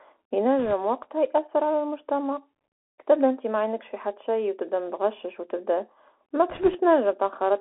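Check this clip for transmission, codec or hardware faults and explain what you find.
Two faults are present: a narrowband headset codec colouring the whole clip, and two short bursts of link errors.

Throughout, the speech sounds boxed-in and gritty, with scratchy s sounds and a fine granular hiss beneath it. This is the Bluetooth CVSD headset codec. Its band of roughly 300 Hz to 3.4 kHz points to a 64 kbps CVSD link. The one-bit up/down coder's adaptive step can't keep pace with loud high-frequency content, so that content distorts.

From 0.59 to 0.73 s, just before "وقتها يأثر على المجتمع", and again from 6.50 to 6.80 s, a rushing, crackly noise washes over the speech without sharp clicks. These are bit errors on a Bluetooth voice link. Flipped bits each nudge the waveform only slightly and their effect fades quickly. The error rate is around one percent in the first burst and somewhat higher in the second, which sounds rougher.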